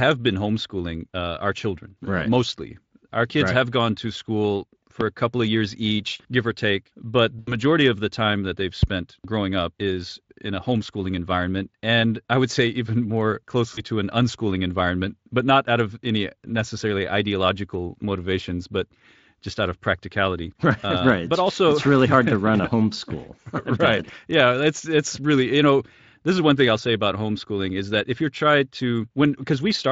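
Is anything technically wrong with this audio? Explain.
Yes. The recording has two kinds of fault.

Loud pop, at 5.01–5.03 s and again at 8.83–8.85 s. Each is a single sharp click peaking roughly 15 dB above the surrounding speech. The speech continues beneath it. The likely cause is a brief voltage step, such as a switch, plug or static discharge, added to the signal. The circuitry after it turns that step into a short, hard pulse lasting about 25 ms.

VoIP packet loss concealed by the speech codec, at 7.39–7.54 s and 13.73–13.85 s. About 80 ms of audio is missing in the first gap, and about 40 ms in the second. These gaps fit the loss of four and two 20 ms packets. The Speex decoder fills each gap by carrying its last pitch and spectral shape forward while lowering the level. The result is a smeared, buzzy tone or coloured noise that fades out. Because each rebuilt frame leans on the previous one, the speech stays weak and rough for a moment after the real packets resume.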